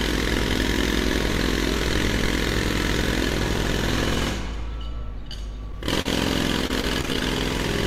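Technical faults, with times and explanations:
5.72 to 5.82 s and 6.02 to 6.07 s, short concealed packet loss. About 20 ms of audio went missing in each spot. The receiver patched the holes by extending the sound that came just before, then blended back into the real signal. At 5.72 s the patch covers about 11 ms and stretches timing by a few milliseconds. At 6.02 s it runs about 35 ms. Each spot is heard as a brief smear or wobble.
6.67 to 7.23 s, repeated packet loss (robotic sound). Six separate holes fall inside this half-second, about 120 ms missing in total. The longest hole is 23 ms. Each one is filled by continuing the previous sound, covering about 102 ms, or 18% of the span. The holes come so close together that the sound turns choppy, with pieces dropped between the patches.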